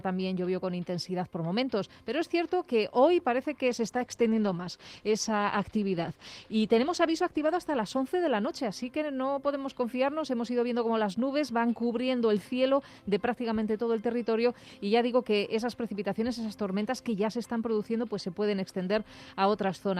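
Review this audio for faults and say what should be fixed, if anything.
From 3.66 to 7.63 s the sound turns rough and muffled, then clears. This is a call bitrate drop: the bandwidth estimate fell, and the encoder coded far more coarsely, which fits a cut from 40 kbps to about 13 kbps. Smoother bandwidth estimation with a floor on the target bitrate would prevent it.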